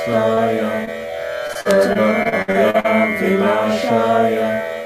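Brief smears at 0.33 to 0.39 s and 0.85 to 0.89 s come from short concealed packet loss: about 40 ms and then 20 ms of audio arrived too late, and the receiver patched each hole by extending the preceding sound before blending back.

From 1.47 to 2.86 s the sound turns choppy, with pieces dropping out. This is repeated packet loss (robotic sound): ten separate gaps, the longest 60 ms, totalling about 300 ms, were each filled by stretching the previous sound, so roughly a fifth of that stretch is synthetic patching.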